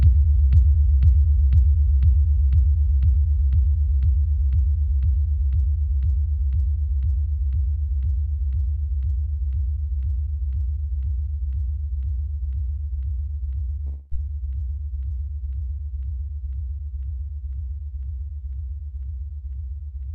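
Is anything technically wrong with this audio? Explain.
Yes. From 13.85 to 14.13 s, a likely long network dropout interrupts the stream: packets stop arriving for about a quarter of a second, and the receiver covers the hole by extending the last sound it had. Over those 0.26 s the audio turns into a synthetic, fading buzz-hiss instead of dropping to silence. The real material from that stretch never plays, so when the sound returns it jumps ahead, with that part lost, into the band-limited, roughly 12 kHz Opus-coded audio.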